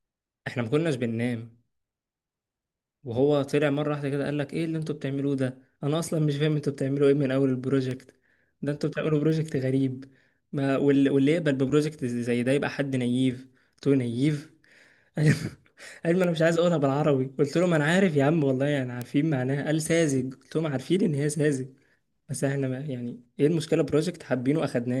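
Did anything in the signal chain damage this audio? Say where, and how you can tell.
Yes. Word clock ticks from the digital interface feeding the converter: a slightly mismatched clock slips one sample about every 1.5 s, from 0.97 to 24.57 s, around twenty times. The spectrogram shows thin, evenly spaced vertical broadband lines, and the waveform shows tiny single-sample steps.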